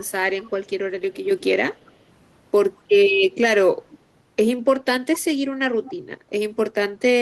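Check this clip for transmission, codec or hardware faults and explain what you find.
Two brief echo leaks appear, at 1.81 to 1.94 s and 5.84 to 5.94 s. Each is a delayed copy of the speech arriving 211 ms late, very faint in the first and more noticeable in the second. The likely cause is a far-end loudspeaker whose echo canceller let residual pickup through. Unlike room reverberation, which decays smoothly, this is a discrete repeat at a fixed lag.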